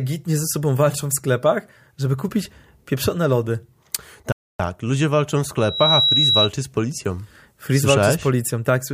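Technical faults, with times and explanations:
4.32 to 4.60 s, rebuffering stall: the speech drops to dead silence for about 0.27 s, then carries on with "ludzie walczą w" right where it left off. The player ran dry of downloaded audio and waited for more, so nothing's missing, just extra time inserted.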